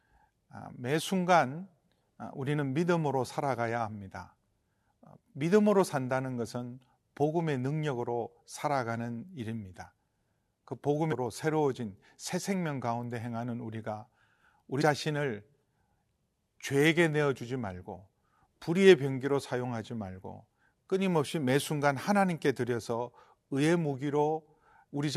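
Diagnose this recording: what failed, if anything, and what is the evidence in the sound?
The fault is damaged data in a compressed stream, at the codec decoding stage. There is a brief glitch in the speech at 11.11 s and another from 14.80 to 14.82 s. Corrupted bytes made the decoder misread those frames, lose sync, and resume at the next valid frame header.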